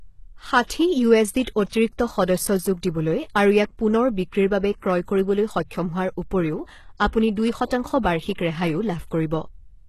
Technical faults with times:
0.00-9.88 HE-AAC compression
0.67-0.70 pre-echo
7.67-7.71 pre-echo

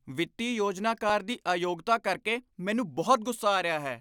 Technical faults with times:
1.10 underrun with held sample

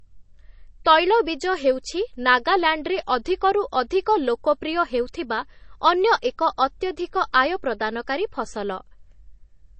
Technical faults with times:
0.00-9.79 MP3 compression

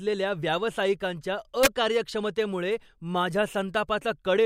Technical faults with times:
1.63-1.66 integer overflow

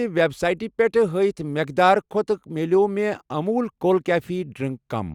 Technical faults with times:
none

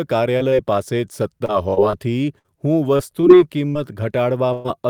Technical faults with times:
0.37-0.53 short concealed packet loss
1.45-3.77 repeated packet loss (robotic sound)
4.53-4.66 burst of packet loss

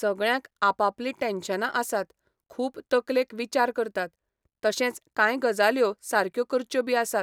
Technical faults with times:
none

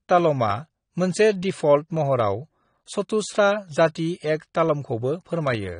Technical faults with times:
0.00-5.80 low-bitrate audio saved at a high bitrate

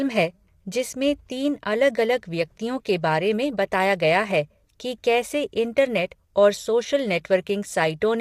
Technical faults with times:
0.00-8.20 low-delay AAC compression

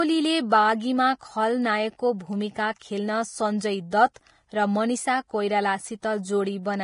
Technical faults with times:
0.00-6.84 Vorbis compression
2.79-2.81 pre-echo
3.90-4.16 pre-echo
6.02 pre-echo

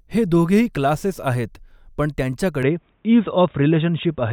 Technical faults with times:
2.63-4.32 input switched to a poorer device

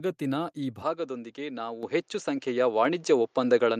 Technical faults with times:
0.82-3.80 input switched to a poorer device
1.83 microphone volume stepped up

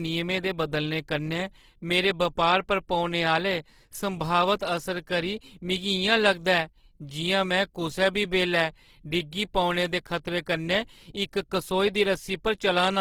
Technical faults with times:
0.00-13.00 Opus compression

